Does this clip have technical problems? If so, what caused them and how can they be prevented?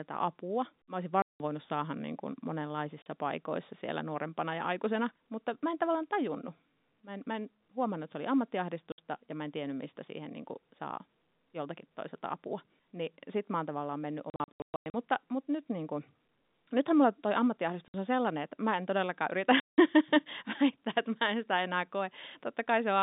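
Yes. Packet loss filled with silence occurs at 1.22 to 1.4 s, at 3.02 s before "paikoissa siellä nuorempana ja", at 8.92 s before "ja mä en tiennyt", scattered across 14.3 to 14.94 s, at 17.88 s between "nythän mulla toi" and "on sellainen että mä", and at 19.6 to 19.78 s. Dropped packets were replaced by silence, leaving hard-edged gaps of 40 to 180 ms that fit 20 ms packets. Using a jitter buffer with packet loss concealment, plus forward error correction or a more reliable network path, would prevent these holes.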